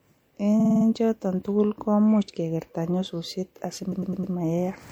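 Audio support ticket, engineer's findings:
Likely MP3 compression at a low bitrate, consistent with roughly 64 kbps; treble is cut and weak detail flickers frame to frame, so speech sounds plainly watery and swirly, with smeared attacks and chirpy sibilants.

Repeated frames, 0.59–0.85 s: a 52 ms block, consistent with two MP3 frames, was delivered five extra times. This causes a rapid stutter and adds 261 ms.

Repeated frames, 3.91–4.33 s: a 104 ms block, consistent with four frames, was replayed four extra times. This produces a slower, stammering stutter and adds 418 ms.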